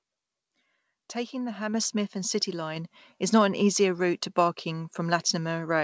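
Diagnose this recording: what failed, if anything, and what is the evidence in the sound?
Microphone volume stepped up twice by call-processing gain control: speech and background jump together, about 6 dB at 1.74 s and about 4 dB at 2.76 s.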